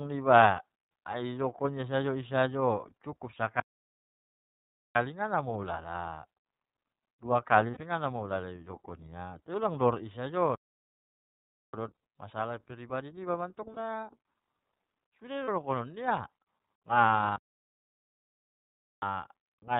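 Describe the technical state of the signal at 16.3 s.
At 16.3 s the speech carries iLBC codec damage, present across the whole clip. Nothing above 4 kHz survives, and each frame is coded on its own, giving a plainly rough, synthetic texture, consistent with 30 ms frames at about 13 kbps. A plain low-pass would sound dull but smooth, without this graininess.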